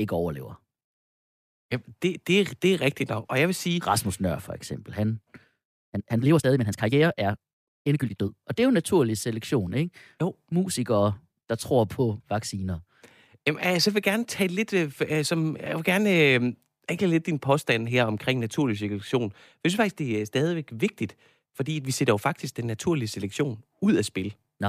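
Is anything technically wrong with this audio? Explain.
Yes. A time-stretched section runs from 5.35 s to 8.29 s, starting just after "for eksempel han". Here the speech suddenly moves at about 1.71 times its surrounding pace while the pitch stays where it was, so the passage sounds rushed. This is likely software compressing the segment to fit a shorter length, holding pitch by discarding short slices of the waveform and joining the remainder.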